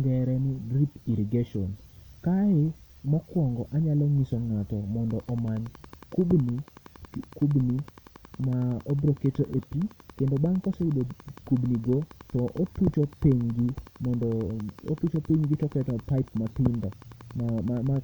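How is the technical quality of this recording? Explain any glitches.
The recording is marred by a train of clicks running from 5.1 s almost to the end, at 17.97 s. Sharp pulses of much the same shape arrive at a regular 10.8 per second, about a hundred and fifty in all, each roughly as loud as the speech. They tick steadily over the talking and through the pauses. This is likely interference from nearby equipment or a faulty connection or power supply. The even, unchanging spacing sets it apart from random crackle or a few isolated pops.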